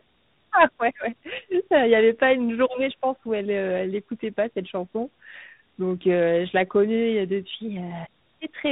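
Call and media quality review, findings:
Rough, muffled, warbly speech throughout, nothing above 3.8 kHz. Tandem speech coding: AMR-NB 10.2 kbit/s, through G.711 A-law, then re-encoded G.726 32 kbit/s. Each border decodes and re-encodes, so the second coder compounds the first coder's artefacts.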